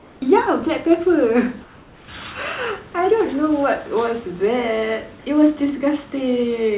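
A speech recording in which the sender's transmission likely dropped out during pauses, leaving the receiver to substitute comfort noise in place of the background: from 0.00 to 0.22 s and from 1.64 to 2.08 s, the room's natural ambience gives way to flat, featureless hiss about 3 dB quieter.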